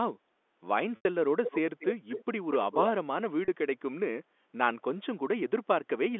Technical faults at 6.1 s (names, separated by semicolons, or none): none